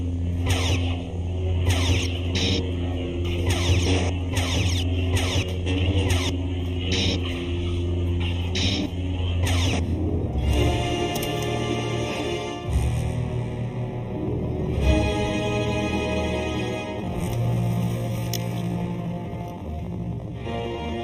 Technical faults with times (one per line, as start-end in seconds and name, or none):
0.00-21.03 channel delay (comb filtering)
16.94-21.03 time-stretched section